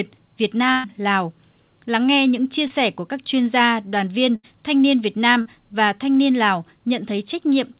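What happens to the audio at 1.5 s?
Nothing goes wrong at 1.5 s: the speech carries on intact through the call path, which keeps it narrowband with nothing above 4 kHz.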